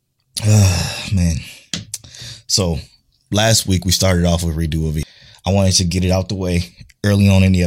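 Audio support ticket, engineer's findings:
CD skip at 5.03 s, speech. Tick, then a very brief mute of a couple of milliseconds. Between "with redo of a" and "I wanted to" the audio resumes from a different point. Probable component: disc transport and laser pickup. A knock or disc flaw threw the laser onto another turn of the spiral, so playback continued out of place.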